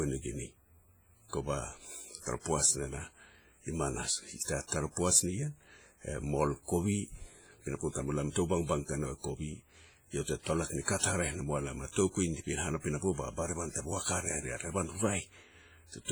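Throughout the speech, a transform encoder is likely working at a low bitrate, heavy enough to suggest something near 24 kbps, which fits WMA compression. Long blocks spread quantisation noise across tens of milliseconds, and weak spectral lines drop out entirely. The result is a ringing, washy quality with a hiss that swells and fades along with the talker.

The same block coding causes pre-echo where sharp onsets land late in a block. The noise budget sized for each attack leaks into the quiet just before it. At 4.67 to 4.72 s a short hiss runs about 45 ms ahead of the onset, and at 10.98 to 11.03 s it runs about 55 ms ahead. Both attacks sound softened and smeared rather than crisp.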